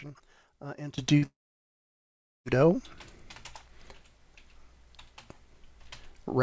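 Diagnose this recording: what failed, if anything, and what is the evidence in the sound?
At 0.98 s everything, noise floor included, steps up about 17 dB and stays there. That's likely a sudden gain jump, a digital gain change applied with no ramp.

From 1.18 to 1.24 s there's a quick smear: short concealed packet loss. About 40 ms never arrived in time, and the decoder papered over it by extending the previous sound.

Then at 1.26 s comes a long network dropout, most likely on the network side. The concealment tails off and leaves roughly 1.1 s of near-silence before the audio resumes at 2.47 s, with that stretch simply gone. The G.722 call path still tops out at 8 kHz throughout.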